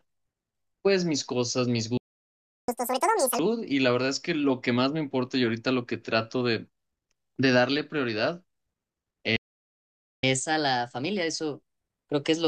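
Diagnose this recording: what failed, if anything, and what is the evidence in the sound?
The failure is a playback stall, at the playback stage. The speech stops in mid-flow at 1.97 s and stays silent for about 0.71 s, until 2.68 s. A second stall runs from 9.36 s to 10.23 s, about 0.87 s. The likely cause is the player's buffer running dry, or its output thread being blocked. Unlike a network dropout, which loses the missing stretch, the speech picks up where it stopped.

The player then plays catch-up at higher speed, resampling its backlog to win back the lost time. From 2.68 s to 3.39 s the speech runs at 2× speed, with pitch raised by roughly ten semitones. After the second stall it runs at 1.15× from 10.23 s until the clip ends, about two semitones sharp. Because pitch rises together with tempo, this is plain resampling, not pitch-preserving time-stretching. It is also not a wrong sample rate, because it comes only right after each stall.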